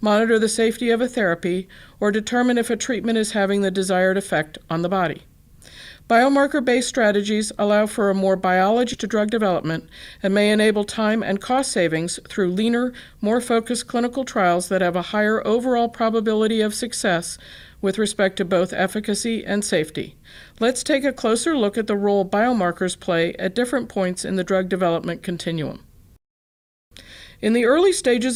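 At 8.93 s a skip ahead occurs. Roughly a second of audio was discarded while later material already sat ready, either lost in transit or dropped by an overflowing jitter buffer. Playback leaps forward with no filler, and the sound on either side of the cut is butted together almost directly. The result is an abrupt jump in which whatever happened during that missing second is simply absent, and latency falls by about a second.

From 9.03 to 12.76 s there is a jitter buffer speed-up. The receiver was holding more audio than its target, so it trimmed short slices of one or a few pitch periods again and again to bring the backlog down, removing roughly a third of a second in total. Over this stretch the audio plays at about 107% speed with its pitch unchanged, so it sounds slightly rushed.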